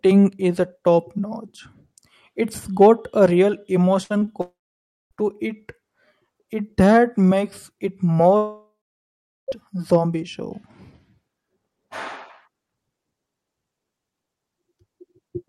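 A burst of packet loss at 4.03 to 4.14 s takes out about 60 ms of the speech. The receiver covers the hole by carrying the last sound forward for roughly 63 ms and turning it down as it goes, so a brief held, fading tail replaces the real audio. The speech then picks up slightly further along, with that stretch gone.

Short concealed packet loss follows twice, at 4.19 to 4.23 s and at 4.25 to 4.29 s, each losing about 20 ms. Both times the decoder extends the preceding sound for those few hundredths of a second and blends back into the real signal. The result is a quick smear or wobble in the speech rather than an audible gap, and a short consonant there can get swallowed.

A long network dropout runs from 4.41 to 5.13 s. About 700 ms of speech is missing. The gap opens with a short stretch of the last sound continued and fading, then roughly 580 ms of silence before the speech returns, skipping what was said in between. 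The likely cause is audio packets failing to arrive for most of a second.

A second long network dropout spans 8.37 to 9.50 s, with about 1.12 s missing. Again the final sound is carried on briefly and dies away, leaving about 770 ms of silence. Speech then resumes past the lost section, which was most likely never delivered by the network.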